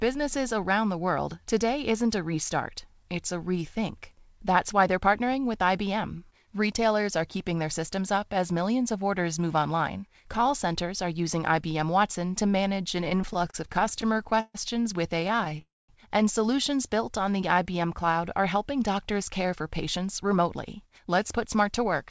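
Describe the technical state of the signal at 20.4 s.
Jitter buffer speed-up, from 19.44 to 22.05 s after "cloud are helping doctors": the receiver trims short pitch-period slices, about a tenth of a second in total, so speech runs 4% faster at unchanged pitch.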